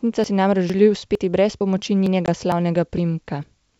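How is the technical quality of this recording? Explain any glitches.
The recording has two kinds of glitch: a regular series of skips and one short dropout.

Audio missing between chunks shows up at 0.24, 0.70, 1.15, 1.61, 2.06, 2.52, 2.98 and 3.43 s. Each is a quick skip where a few tens of milliseconds vanish and the edges butt together. The likely cause is processing in 0.5 s chunks that drops audio at each handover.

Packet loss on an ADPCM call occurs from 2.26 to 2.29 s. About 20 ms, roughly a couple of packets, drops out as a hard-edged hole. The decoder's predictor and step size lose track of the sender's. Speech returns slightly distorted, then settles.

The underlying G.722 wideband telephone coding sounds consistent with 64 kbit/s, with little or no audible coding damage.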